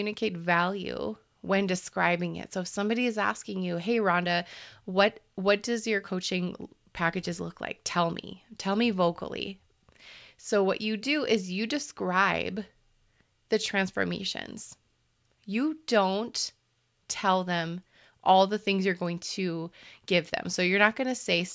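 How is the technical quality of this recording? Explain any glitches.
The technical quality of this recording is sound, with no glitches to explain.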